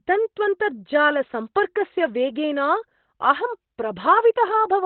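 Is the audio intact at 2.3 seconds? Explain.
No. At 2.3 seconds, as across the whole clip, the speech is muffled and hoarse with nothing above 4.2 kHz, most likely from Opus compression in its narrowband speech (SILK) mode at a rate that fits about 12 kbps. The roughness sets it apart from a clean low-pass, and there is less swirl than MP3 would give.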